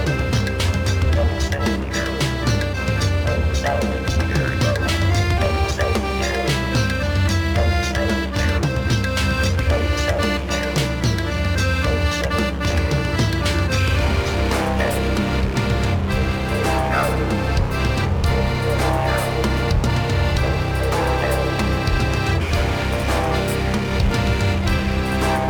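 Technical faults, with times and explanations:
Throughout, crude rate conversion. Repeated samples, unfiltered, fit 44.1 kHz to 48 kHz. An inharmonic fizz, about 25 dB down, follows loud, bright sounds.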